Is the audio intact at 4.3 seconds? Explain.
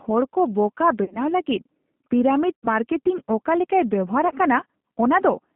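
No. From 4.28 to 4.34 s, about 30 ms of packets were lost, which fits three 10 ms frames, and the speech decoder concealed the gap with VoIP packet loss concealment. It extrapolated from its last pitch and filter state at falling gain, so the sound smears into a fading buzzy tone or coloured noise. Because each frame builds on the previous one, the sound stays weakened briefly after packets return.

Underneath, the G.729 codec degrades the line throughout. It rebuilds the signal from a tract filter, a pitch predictor and sparse pulses at a rate that points to 8 kbit/s. The band is held to 150 Hz–3.6 kHz, and the sound is plainly rough and synthetic.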